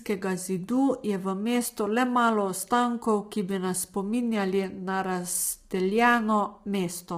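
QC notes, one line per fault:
throughout, low-delay AAC compression: rough, grainy speech with noise between harmonics, likely short-frame AAC-ELD at a rate fitting about 24 kbps, without long-frame pre-echo.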